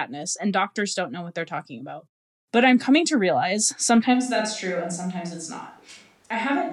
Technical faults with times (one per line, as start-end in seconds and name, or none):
4.16-6.73 switch to a distant microphone